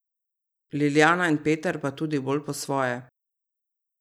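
A speech recording with nothing technically wrong with it.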